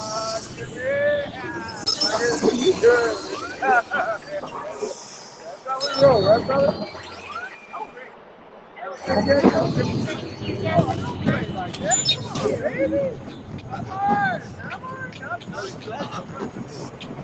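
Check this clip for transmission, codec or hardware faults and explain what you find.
The main fault is a speech-oriented noise suppressor acting on non-speech sound. It causes level swings across the clip and deeper dips at five points. Content stops at 8 kHz, which fits an Opus call path at around 20 kbps.

Noise suppressor applied to music or sounds, throughout: the suppressor treats steady tones, ambience and decays as noise and attenuates them. Transients pass while sustained material sinks, so the level pumps and thins, with gain swinging by around 10 dB.

Sound cut by the noise suppressor, at 0.46–0.76 s (about 5 dB), 5.18–5.66 s (about 6 dB), 7.56–8.77 s (about 6 dB), 15.71–15.86 s (about 4 dB) and 16.49 s to the end (about 6 dB): these sounds were classed as noise and pulled down harder, so they sink in level or their tails are cut short.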